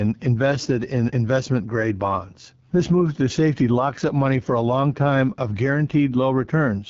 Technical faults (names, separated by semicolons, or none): AMR wideband (HD Voice) codec